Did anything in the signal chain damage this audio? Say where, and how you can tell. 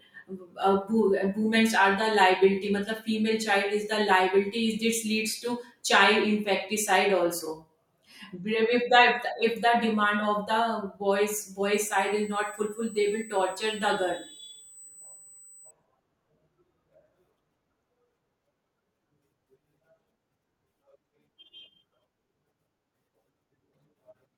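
Yes. A USB whine sits in the speech from 11.74 to 15.71 s. It is a steady, fixed-pitch tone at 8 kHz, about 25 dB below the speech. The damage happens in the analogue wiring, through shared power or ground. A USB interface pulls current in 125-microsecond microframes. That repeats 8000 times a second. The current ripple leaks into the audio path, and its rate becomes the pitch you hear.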